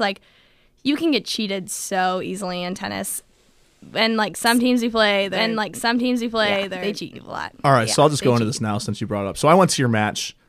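From 4.46 s to 8.58 s the speech is shadowed by a second, full-band copy of itself running about one and a half seconds behind and somewhat quieter, roughly 5 dB down. The copy has no reverb tail or room colour, and it cuts in and out abruptly at both ends. This is a doubled audio track, likely caused by the same signal being captured a second time through a slower path and mixed back in with a fixed delay.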